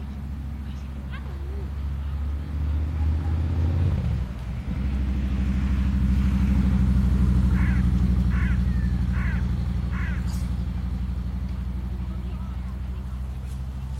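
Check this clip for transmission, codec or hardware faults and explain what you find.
No faults can be heard.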